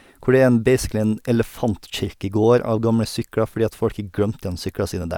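No technical faults are audible anywhere in the speech.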